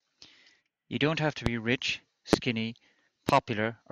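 Speech clip with three loud pops on top of it, each a sharp single hit lasting about 30 ms: 1.46 to 1.49 s, 2.33 to 2.36 s, and 3.29 to 3.32 s. They jump well above the speech, roughly 20 dB for the first and last and nearer 25 dB for the middle one, while the talking carries on underneath. That's likely a voltage spike getting into the chain, from something like a connector, switch, static discharge or driver glitch.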